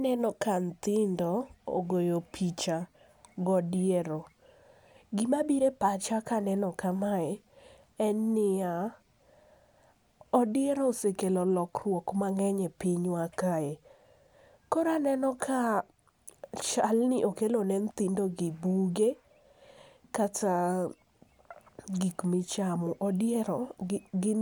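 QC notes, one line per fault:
No fault events were found anywhere in this speech clip.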